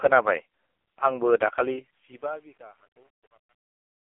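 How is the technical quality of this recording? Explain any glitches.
Poor. For the whole clip the speech sounds thin, buzzy and synthetic, like a weak mobile call, with nothing above 3.4 kHz and little below 300 Hz. This is heavy AMR narrowband mobile codec damage. Each 20 ms frame is rebuilt from a vocal-tract model driven by only a few pulses, and that sparse, robotic texture points to AMR-NB's lowest mode, around 4.75 kbps.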